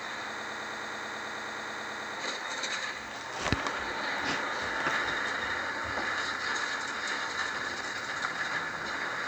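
A broken-record loop runs from 0.39 to 2.15 s: a 0.11 s fragment of sound repeats exactly, back to back, sixteen times, giving a rapid stutter. The player or stream likely stalled and kept resending its last fragment, so the intended sound is lost.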